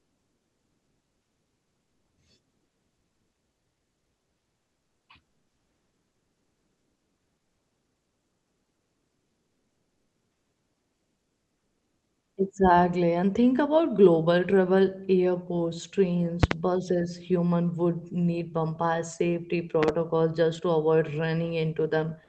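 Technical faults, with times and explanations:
0.00–2.17 s, comfort noise in place of the background: during this pause the real room background is replaced by a smooth, featureless hiss at the same level. This is likely the codec's discontinuous transmission, with the receiver synthesising shaped noise while no speech is sent.
5.28–12.37 s, comfort noise in place of the background: a longer stretch of the same steady synthetic noise, about 2 dB quieter than the real background, which sits about 55 dB below the loudest speech. It is likely again discontinuous transmission filling a pause.
16.43–16.54 s, loud pop: right after "about global travel airports", two sharp pops in quick succession stand about 20 dB above the speech, which continues underneath. They likely come from a sudden voltage step, such as static or a switch, added to the signal.
19.83–19.91 s, loud pop: between "would need bumpire safety" and "just to avoid", a second close pair of pops peaks about 15 dB above the speech. 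This is likely a brief electrical pulse, shaped by the downstream circuitry and heard as a double thump.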